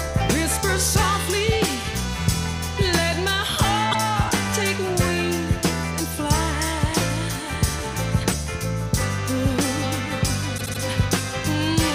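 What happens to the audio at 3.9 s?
Repeated frames: a 52.2 ms block, fitting two compressed frames, was sent twice at 3.91–3.96 s, so the sound stutters and runs 52.2 ms longer.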